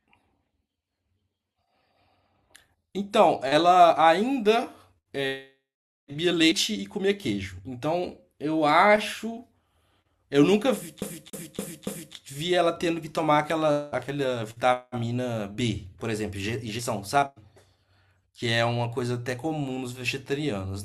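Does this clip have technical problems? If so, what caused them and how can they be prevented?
Yes. From 11.01 to 12.15 s the speech sticks like a CD stuck on one turn. A scratch throws the laser back one track each revolution, so one 0.28 s slice repeats four times with a short mute at every jump. That fixed, evenly timed loop separates it from a buffer underrun's irregular stutter. Cleaning or replacing the disc, or ripping it with error-correcting software, prevents this.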